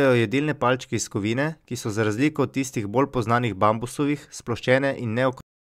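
At 5.41 s the speech stops dead in the middle of a sound. This is a cut-off end. The final stretch of audio was never written or played out, so the signal does not finish naturally. There is no decay and no trailing tail. The level falls straight to digital silence, which holds for the last 0.37 s. The effect is abrupt, as if the recording were chopped off mid-utterance.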